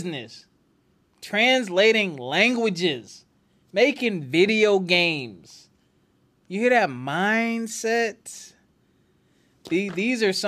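A speech recording with nothing technically wrong in it.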